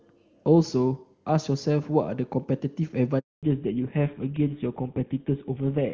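At 3.19 s comes a handover gap. The call changes networks, no frames arrive, and the sound drops out completely for 240 ms.

From 3.43 s to the end, a fallback to narrowband follows. Clear HD Voice gives way to an older codec. Nothing above 4 kHz survives, so speech turns dull and rough.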